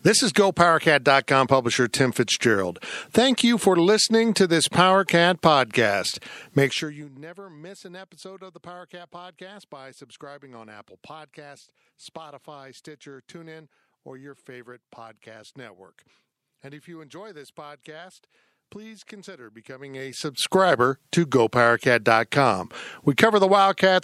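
From 6.62 to 7.11 s, just before "miss an episode of", zipper noise accompanies a drop of roughly 25 dB. After "this podcast please consider", 19.64 to 20.67 s, the level rises similarly. Unsmoothed 1 dB gain steps, about 40 per second, each click audibly, producing a fine zipping texture.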